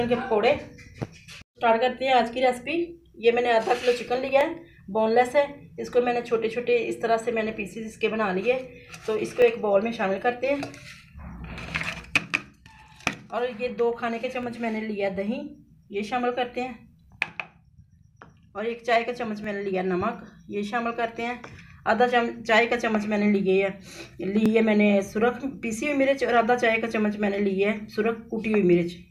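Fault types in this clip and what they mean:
Overlapping chunks: the audio was handled in 5.0 s blocks, and each block starts slightly before the previous one ended, so a 12 ms slice plays twice at every join. This gives brief stutter-clicks at 4.41, 9.42, 14.43, 19.44 and 24.46 s. Unlike a dropout, no sound goes missing. A sliver is repeated instead. The steady spacing, about every 5 s, sets it apart from random glitches.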